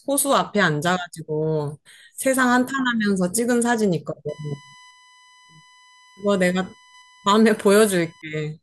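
From 4.29 s to 8.22 s, current drawn by the USB bus in its 1 ms frames leaks into the audio through the power or ground, producing USB whine: a steady, fixed-pitch 1 kHz tone sitting roughly 30 dB below the speech throughout that stretch.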